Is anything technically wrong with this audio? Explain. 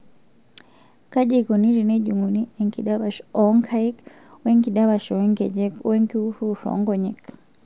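No, nothing is technically wrong with this audio.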